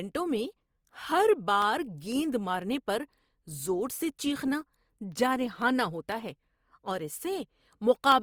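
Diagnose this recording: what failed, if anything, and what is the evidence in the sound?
Codec stage: grainy, rough speech at full bandwidth, without MP3-style swirl, likely from Opus compression in CELT mode near 24 kbps.

Driver stage: periodic USB or driver dropouts, sub-millisecond silent gaps ticking every 0.5 s from 0.12 to 8.12 s. Their strict regularity rules out network loss.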